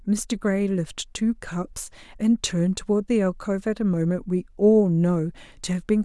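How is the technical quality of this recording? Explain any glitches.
Good news: there aren't any glitches to explain here, as the recording runs along without anything going wrong.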